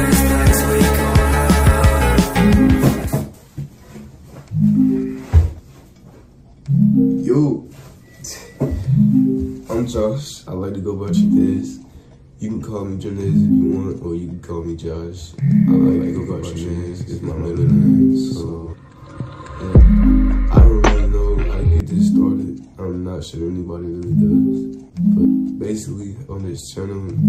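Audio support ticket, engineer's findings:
Doubled audio track, 15.49–18.73 s: full-band copy about 150 ms behind, roughly equal level, dry, abrupt on/off. Likely second capture path or misaligned edit.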